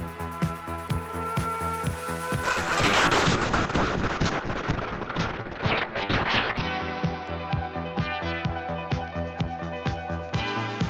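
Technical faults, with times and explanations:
2.44 s to the end, call bitrate drop: the sound turns rough, watery and muffled above 6 kHz, which fits the encoder falling from 32 to about 6 kbps.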